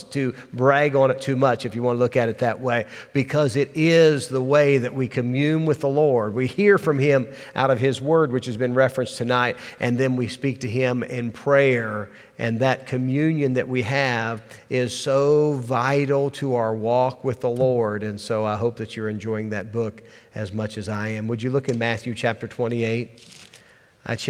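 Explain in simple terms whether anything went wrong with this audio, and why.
Nothing went wrong with this recording: no technical faults or glitches can be heard anywhere in it.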